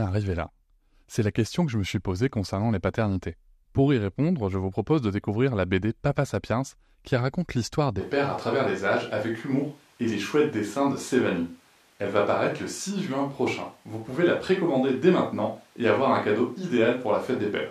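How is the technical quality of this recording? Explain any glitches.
The first half is clean, but from 8.02 s to the end the speech turns abruptly roomy and hollow, with thinner bass and a faint background of room noise around 35 dB below the speech. This sounds like a switch to a distant microphone, likely because the close microphone's signal dropped out. The level barely changes, and the added roominess together with the noise sets it apart from a simple EQ change.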